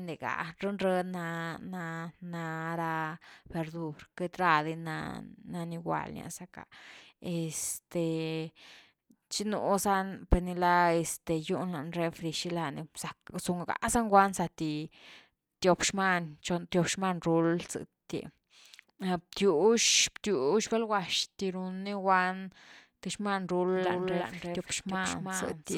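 At 23.76 s a doubled audio track begins abruptly and runs to the end. A second full-band copy of the speech trails by roughly 300 ms, about 5 dB quieter, with no room decay. Likely cause: a slower second capture path, or an edit holding two misaligned copies.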